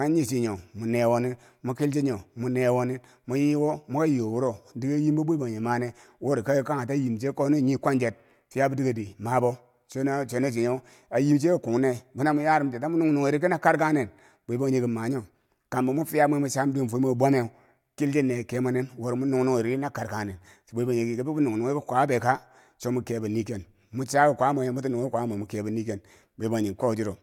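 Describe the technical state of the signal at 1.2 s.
At 1.2 s the signal is intact, with no audible technical fault.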